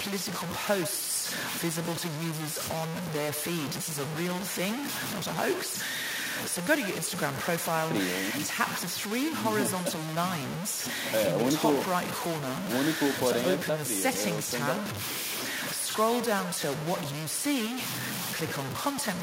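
From the first moment to the end, the speech is coated in a harsh, grainy distortion that rises and falls with the voice, so the grit is loudest on loud syllables. The error sits almost level with the speech itself, and quiet tails break up into sputter or drop to silence. This is low bit depth without dither, likely a truncation to about 4 bits with no noise added to decorrelate the rounding error.

Throughout the clip, every phrase is also trailed by a fainter, thinner copy arriving roughly a tenth of a second later, about 14 dB below the direct speech, which gives the voice a hollow, slapback doubling. This is echo with no canceller: the far end plays the call through a loudspeaker, its microphone captures that playback, and nothing subtracts it before it travels back, so the talker's own voice returns after the round trip.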